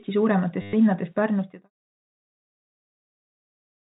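From 0.62 to 0.73 s there is packet loss with the last packet repeated. About 110 ms went missing. The receiver replayed the last good packet instead. The run buzzes near 100 Hz, which fits 10 ms packets.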